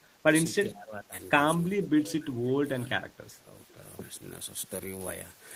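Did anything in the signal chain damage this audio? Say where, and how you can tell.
Yes, in call processing: speech suppressed in double talk, likely from an echo canceller clamping down. The speech dips at 0.00–0.05, 0.66–1.14, 1.76–2.92 and 3.35–3.53 s, by up to about 20 dB. The waveform shows abrupt envelope notches, and the spectrogram shows darkened patches.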